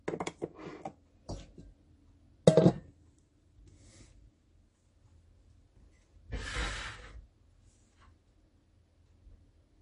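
MP3 compression artefacts run through the whole recording of sounds, and the damage is plainly audible. Nothing is left above 10.5 kHz, a fixed treble cutoff that likely comes from an MP3 encoder short of bits, which fits a low bitrate of around 40 kbps. With so few bits, the encoder drops the weakest frequency lines and lets others flicker in and out between frames, giving the audio a watery, swirling texture and softening sharp attacks.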